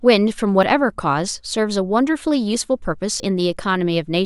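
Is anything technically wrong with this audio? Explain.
Yes. At 0.63 s, 2.31 s and 3.2 s the speech jumps abruptly, and this is most likely a dropped buffer (overrun). The capture software failed to read its incoming block before the hardware wrote over it, so a short stretch vanished and the sound on either side was butted together. No gap of silence appears. Instead the speech skips forward by roughly 20 ms at the first two points and about 30 ms at the third.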